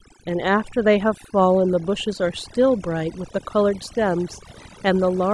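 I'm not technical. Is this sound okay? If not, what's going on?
No. Overdone noise removal runs through the whole clip. Background noise was scrubbed too hard, leaving near silence with twinkling specks.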